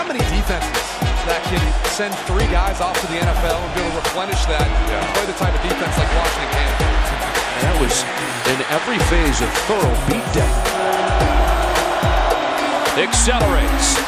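Nothing jumps out here: no faults turn up anywhere along the way, so there's nothing to walk through in time order.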